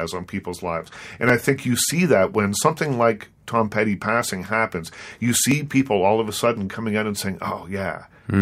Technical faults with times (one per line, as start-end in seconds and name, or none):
0.24-7.63 clock drift buffer slips